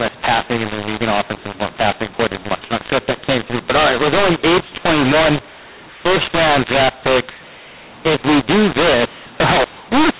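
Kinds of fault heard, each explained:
mu-law and A-law mixed up: A-law telephone samples are decoded as mu-law, scrambling levels throughout, so the speech sounds harsh and distorted and pauses fill with noise.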